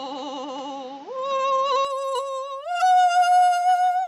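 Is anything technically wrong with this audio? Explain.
Yes. From the start to 1.85 s the music sits in a narrower band, with nothing above 7.3 kHz, a level offset of around 5 dB and a new background hiss roughly 30 dB under the music. At 1.85 s the full band returns with no gap. The likely cause is an input switched to a poorer device: a lesser microphone path carries its own bandwidth limit, gain and noise. A simple low-pass filter would not bring the extra noise or the level step.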